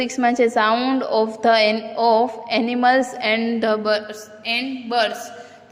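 Nothing here stands out as a technical problem; the sound just carries on steadily with no glitches or interruptions to point to.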